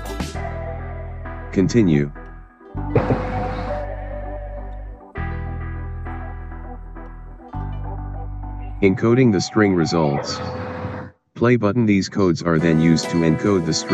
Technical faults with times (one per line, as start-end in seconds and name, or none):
7.63-12.41 channel delay (comb filtering)